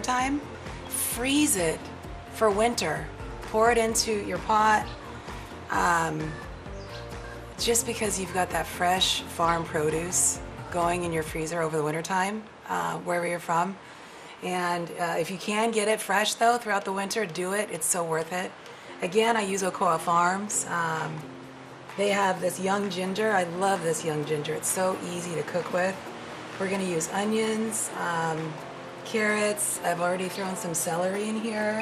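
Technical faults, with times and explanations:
Throughout: MP2 compression. The sound is dull and gurgly, with granular grit and upper detail flickering in and out. This is likely Layer II coding at a low rate, around 80 kbps, starving the top sub-bands of bits, switching them off and coarsely quantising the rest.
9.96 to 9.98 s: DAB burbling. A quick burst of noise blips pops up over the sound. Bit errors at roughly 0.4 percent seem to slip past error correction into four frames, putting short blips of noise into individual sub-bands.
22.23 to 22.25 s: repeated buffer. You get a tiny buzzy stutter as one short slice plays three times back to back with hard joins. The length fits a 10 ms buffer replayed while fresh audio ran late, and nothing seems lost afterwards.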